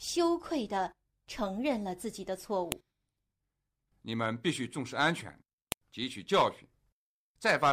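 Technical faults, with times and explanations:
2.72 s and 5.72 s, file header played as audio: a sharp, loud snap marks where each 3-second piece joins, because its header bytes were played as samples. Unlike a random glitch click, it lands exactly on a regular 3.0 s grid regardless of the speech.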